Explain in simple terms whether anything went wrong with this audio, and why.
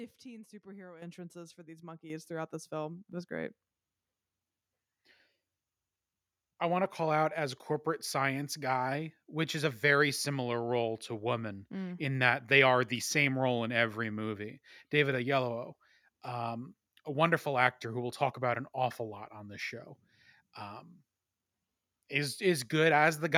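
Yes, something went wrong: a microphone volume step-up, twice. The calling software judged the microphone too quiet and raised its input volume in sudden jumps, at 1.02 and 2.1 seconds. Each time, speech and background get louder together, the second jump slightly smaller.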